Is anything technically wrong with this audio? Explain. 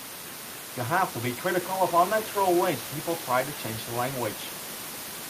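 No, nothing's technically wrong here, and the only thing in the background is some ordinary room noise sitting about 14 dB below the speech, which is just part of the space the microphone was in.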